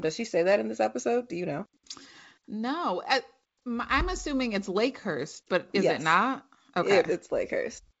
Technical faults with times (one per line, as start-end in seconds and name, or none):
none